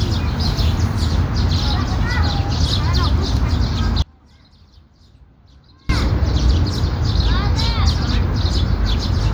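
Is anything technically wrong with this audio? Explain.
Yes. From 4.02 s to 5.89 s there is an audio dropout to a faint residue. The sound is lost for about 1.87 s and only a faint leak remains, roughly 30 dB below its normal level. The likely cause is a brief loss of the wanted signal while the path downstream stayed live. It differs from a deliberate pause or fade because the cut and return are both abrupt. Unlike a dropout to true silence, a weak trace stays audible throughout the gap.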